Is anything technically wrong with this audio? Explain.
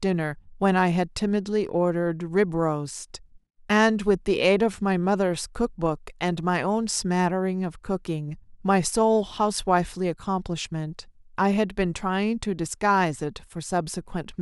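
No, nothing technically wrong turns up anywhere in this recording.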